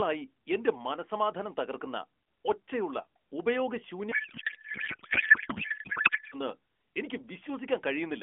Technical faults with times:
4.12-6.35 codec payload misread

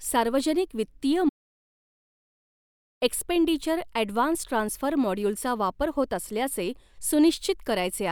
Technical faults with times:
1.29-3.02 audio dropout to silence

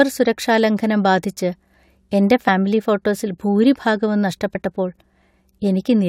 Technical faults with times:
2.47 compressed frames skipped
4.54 compressed frames skipped

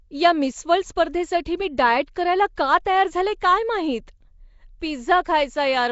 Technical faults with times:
0.00-5.91 Nellymoser compression

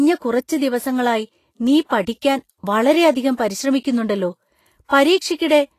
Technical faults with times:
0.00-5.79 Vorbis compression

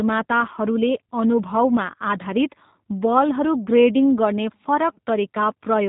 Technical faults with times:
0.00-5.89 G.729 codec

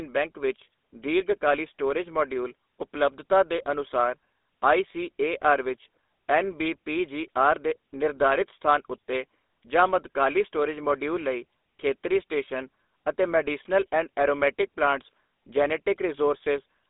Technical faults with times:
0.00-16.89 GSM full-rate codec

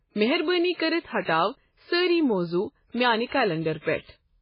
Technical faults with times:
0.00-4.41 MP3 compression

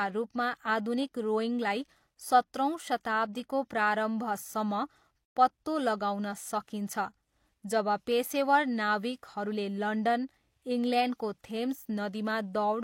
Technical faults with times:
5.25-5.37 gap at a join of encoded pieces

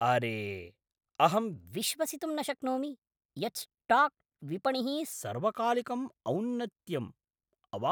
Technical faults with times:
1.71-5.12 section at the wrong speed

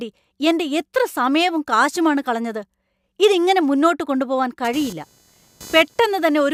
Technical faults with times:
4.64-6.53 computer activity noise

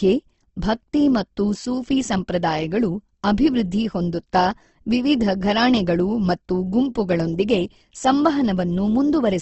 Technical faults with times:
0.00-9.42 Opus compression

